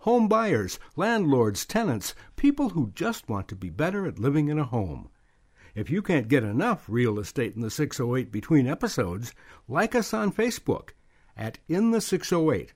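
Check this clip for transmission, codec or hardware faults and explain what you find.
One fault runs through almost the whole clip: clock slip clicks from 0.16 s to 12.61 s. Two devices in the chain are likely running on unsynchronised clocks that differ by around 100 ppm, so a single sample is dropped or repeated each time the drift adds up to a whole sample, about every fifth of a second. Across the speech this gives roughly fifty faint, evenly spaced ticks, most noticeable on louder sustained sounds and missing in the pauses.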